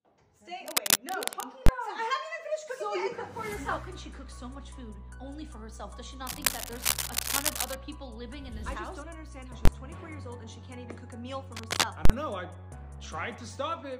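Right at 0.67–1.46 s there's scratchy, rustling noise sitting well above the sound. That's cable scratch noise, likely a worn lead or connector being jostled so its contact flickers. At 1.66–1.69 s you get a hard bang where invalid numbers at full scale pinned the output for about 21 ms, which fits a 1024-sample block. The scratching comes back a bit softer at 6.27–7.75 s, then another identical bang hits at 9.65–9.68 s. A final burst of scratch at 11.55–11.85 s is followed by a longer full-scale hit at 12.05–12.10 s, about 43 ms, fitting a 2048-sample block.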